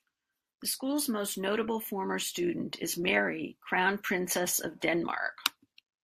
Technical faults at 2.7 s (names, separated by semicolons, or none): none